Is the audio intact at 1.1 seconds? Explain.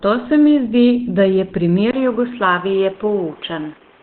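No. At 1.1 seconds, as throughout, the speech carries heavy damage from likely Opus compression at a starved rate, consistent with about 12 kbps, which pushes the encoder into its narrowband SILK speech mode. Nothing remains above 4.2 kHz, leaving the speech muffled and hoarse.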